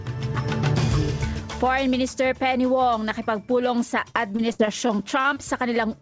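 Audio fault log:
4.10–5.38 s, repeated packet loss (robotic sound): Eight short holes open in quick succession, the longest 64 ms. Each is patched by stretching the sound just before it. About a sixth of the stretch is filled in, so it turns choppy, with pieces missing. Nothing sounds above 8 kHz, which fits a G.722 call codec.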